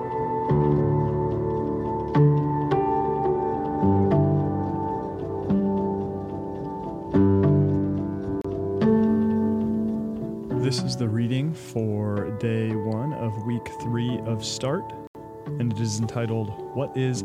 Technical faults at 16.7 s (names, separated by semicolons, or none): none